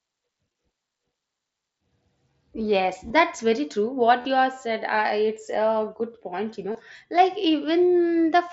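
Speech with concealed Bluetooth headset packet loss at 0.53 s and from 3.08 to 3.10 s, 4.21 to 4.25 s and 6.72 to 6.75 s. The receiver repeats the closest-matching recent waveform, so the longest gap, about 40 ms, holds a buzzy full-level tone before warbling back into the mSBC-coded speech.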